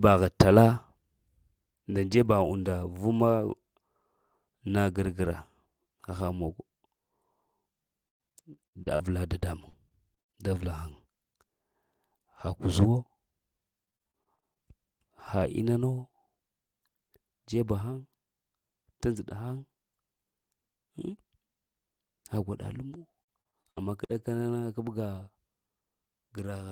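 Repeated packet loss (robotic sound) strikes the speech four times: 8.07–9.03 s, 9.38–10.39 s, 13.85–14.71 s and 22.93–24.35 s. In each stretch the stream keeps dropping data in quick succession, and the receiver patches every hole by stretching the last sound it had. The first burst is worst, with gaps up to 119 ms and over a third of the span concealed, so it sounds choppy. The later bursts are lighter but still choppy.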